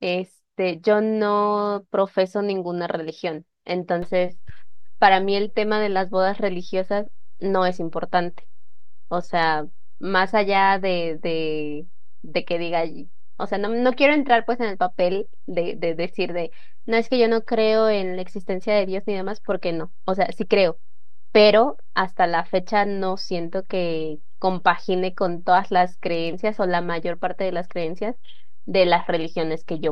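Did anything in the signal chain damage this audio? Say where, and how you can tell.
Yes, there's a DC step at about 4.02 s: a single low thump, then the zero line sits offset by about -27 dBFS through to the end while the speech carries on unchanged. That points to the converter recalibrating or an offset input being switched in.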